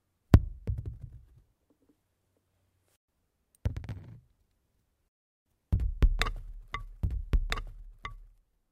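A second capture path or an edit has likely laid the audio in twice, producing a doubled audio track from 7.02 s to the end. A full-band copy trails about one and a half seconds behind, roughly 5 dB quieter, starting abruptly and carrying no decay or room colour.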